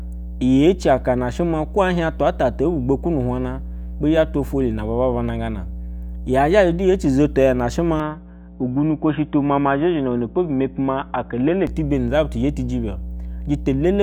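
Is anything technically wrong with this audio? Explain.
Yes, there are two faults: a constant mains hum and a stretch where the speech goes narrowband.

Mains hum runs through the whole recording as a steady 60 Hz tone with low harmonics, sitting strong under the speech at about 10 dB below it. This happens when a ground loop or nearby transformer leaks the power-line frequency into the signal path. It is audible as a continuous low drone, clearly present in pauses and still noticeable beneath the talking.

From 8.00 s to 11.67 s the speech loses everything above 3.8 kHz, so sibilants and consonant detail dull abruptly into a boxy, telephone-like sound, then brighten again at the end. A faint different background noise appears during that span, while loudness stays about the same and there is no gap at either transition. This is the signature of an input switched to a poorer device, likely a headset call profile or another microphone taking over mid-recording.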